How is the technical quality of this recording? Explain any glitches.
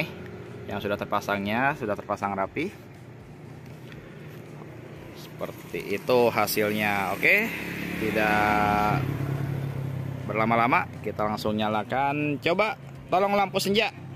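The recording has one clear glitch: a two-second stretch of pre-emphasis left on. From 5.39 to 7.39 s, the treble lift of the CD 50/15 µs curve was applied with no matching de-emphasis afterward. Highs sit about 8 dB above 1 kHz at 10 kHz, so the sound turns thin, bright and hissy-sibilant.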